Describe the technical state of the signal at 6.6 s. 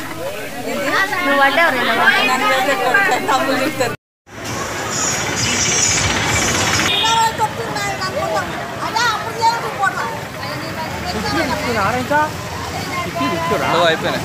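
At 6.6 s the signal is intact, with no audible dropout, distortion, glitch or other fault.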